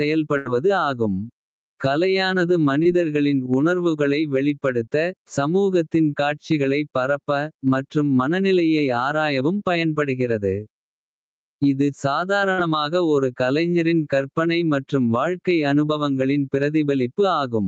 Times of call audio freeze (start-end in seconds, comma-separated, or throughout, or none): none